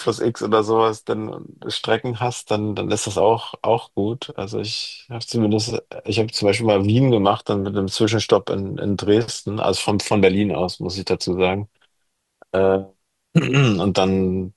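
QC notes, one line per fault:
Nothing stood out on listening to the speech.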